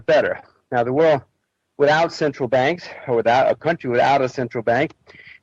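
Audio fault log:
No faults are heard anywhere in the clip. Nothing in the sound calls for an entry in this log.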